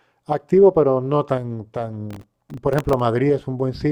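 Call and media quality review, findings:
Gritty crackle and tearing on the speech, 2.11 to 3.00 s, clearing once the load drops. Processor overload crackle in the audio processing path. Repeated missed buffer deadlines, each hole filled with a stale, hard-edged scrap of old audio. Spacing fits a very short buffer of about 1.5 ms, with a few dozen misses across the burst.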